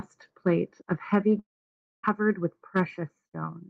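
From 1.39 to 2.05 s the speech breaks off in a long network dropout. The last sound is stretched briefly into a fading buzz, then about 0.59 s of silence follows, which points to a likely stall in packet delivery lasting some 0.64 s. Unlike a short packet-loss glitch, the gap is far too long to conceal. Unlike a buffering pause, the speech picks up later in its course, with the lost stretch simply skipped.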